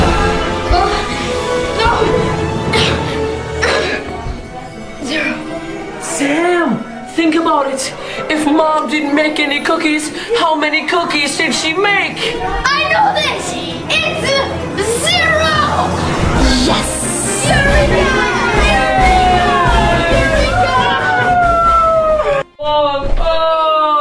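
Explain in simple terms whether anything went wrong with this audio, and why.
Nothing went wrong with this audio. Listening closely, no moment stands out as a technical problem.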